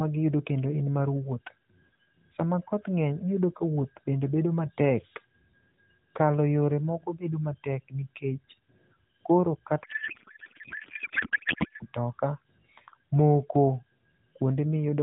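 A speech recording carried over AMR narrowband, so nothing sits above 4 kHz. Right after "koro kata", from 9.84 to 11.86 s, a codec payload misread takes over. The speech becomes garbled noise and warble that barely tracks it, which points to octet-aligned AMR frames being unpacked as bandwidth-efficient. On a spectrogram the formant and harmonic structure dissolves into smeared, shapeless energy below 4 kHz. The waveform envelope stops following the syllable rhythm until clean decoding resumes.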